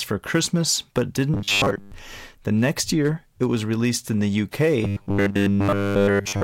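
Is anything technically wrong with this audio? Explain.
Yes. Robotic sound from repeated short buffers appears from 1.34 to 1.92 s and from 4.85 s to the end. New audio likely arrived too seldom, so a 10 ms stretch kept repeating through most of the first span and all of the second, imposing a rigid, metallic 100 Hz buzz on the speech.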